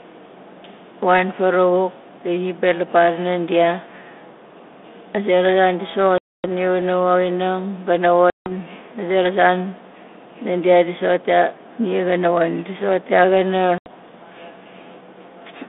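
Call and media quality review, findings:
Packet loss on an ADPCM call: hard-edged silent gaps at 6.18–6.52 s (260 ms lost), 8.30–8.52 s (160 ms, before "a zera") and 13.78–13.90 s (80 ms). Restarts return slightly distorted because the 32 kbit/s G.726 decoder's predictor and step size desync from the sender's, then resync.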